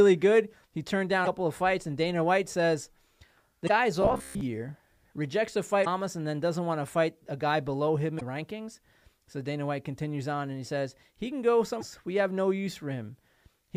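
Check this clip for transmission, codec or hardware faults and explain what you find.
Two kinds of fault show up in this speech clip.

Damaged data in a compressed stream hits five times, each about 55 ms: 1.22–1.27 s (just before "of fights"), 3.65–3.70 s, 5.81–5.87 s (between "rejects a" and "and then doesn't want"), 8.17–8.22 s, and 11.77–11.83 s (right after "says he can go"). Corrupted frames make the decoder lose sync and hunt for the next header, so you get a brief glitch at each spot.

Robotic sound from repeated short buffers runs from 4.02 to 4.41 s. The sound collapses into a stiff metallic buzz at about 67 Hz that still loosely tracks the speech. It's likely the playback repeating a roughly 15 ms chunk while most of the real audio gets skipped.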